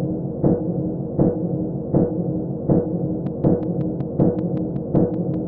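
Interference from nearby equipment or a faulty connection is the likely source of a train of clicks from 3.27 to 5.35 s. Around ten near-identical pulses tick at a regular 5.3 per second, peaking a few dB above the sound itself.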